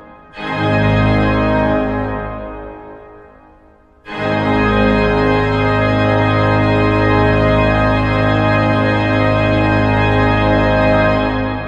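No technical faults can be heard anywhere here.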